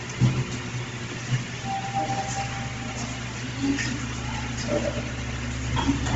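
From start to end, a noise suppressor applied to these sounds treats sustained tones and tails as noise, so levels pump by roughly 5 dB. The waveform shows envelopes dipping after each attack.

Throughout, the spectrogram shows a hard ceiling at 7.7 kHz and sparse, grainy upper bands, likely Bluetooth LC3 compression at a low bitrate around 24 kbps.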